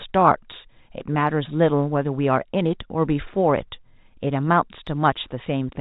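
Nothing stood out on listening to this speech, which carries the narrow, telephone-band sound of standard G.711 coding.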